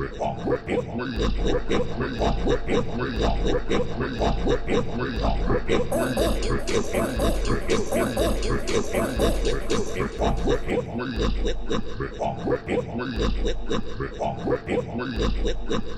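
A second capture path or an out-of-step edit likely mixed this sound recording in twice, producing a doubled audio track from 1.38 to 10.70 s: an equally loud, full-band copy trails about a second behind, with no decay or room colour, starting and stopping abruptly.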